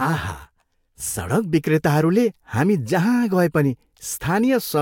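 From 0.0 to 1.0 s, channel delay (comb filtering): one channel lags about 10 ms, cutting evenly spaced notches from around 40 Hz. The speech sounds hollow; a spectrogram shows fixed horizontal stripes.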